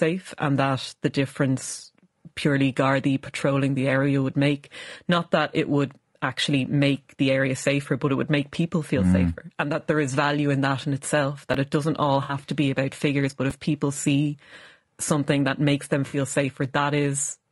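Low-delay AAC compression runs through the whole clip: the speech sounds rough and grainy, with noise filling the gaps between harmonics and a thin, synthetic top band. This is likely AAC-ELD, where short frames resolve pitch poorly, and the damage fits a bitrate around 32 kbps.

Chunks out of order occur at 11.53 s and again at 13.50 s, between "be about figures but" and "people see". Each time, a 5.8 ms slice plays one chunk late, so the sound jumbles briefly.

AAC frame loss with concealment occurs from 12.23 to 12.33 s, between "it doesn't all" and "to be about figures", and from 16.07 to 16.17 s, after "something that makes them". In both, about 60 ms of missing audio is rebuilt from the last good spectrum, which fits three lost frames, leaving a smeared, noisy or phasey patch.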